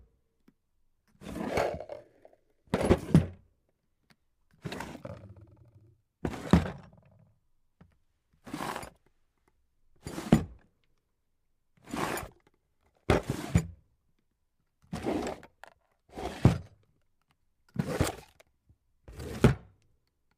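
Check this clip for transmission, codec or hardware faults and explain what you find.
No transmission, codec or hardware faults.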